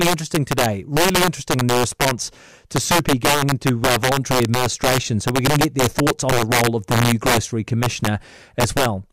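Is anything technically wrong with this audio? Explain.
Yes, there's integer overflow running through the whole clip. The speech was pushed roughly 4 dB past full scale, and instead of being limited, those peaks wrapped around to the opposite sign. Only a small fraction of samples, a few percent, actually cross the limit, but each one jumps across the entire range. So on the louder syllables you get violent, sharp cracks, much harsher than ordinary clipping, while quieter passages come through intact.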